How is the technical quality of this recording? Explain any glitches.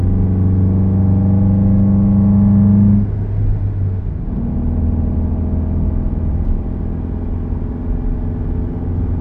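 The whole recording sounds slowed and lowered: everything drags and sits noticeably deeper than it should. This is a wrong sample rate fault running from start to finish. Playback is at about 0.73 times the original speed, and pitch has dropped by about 5.5 semitones. That ratio fits material captured at 44.1 kHz being played out at 32 kHz with no rate conversion. Because the samples are read out more slowly than they were taken, timing stretches and every frequency falls by the same proportion, so tempo and pitch shift together.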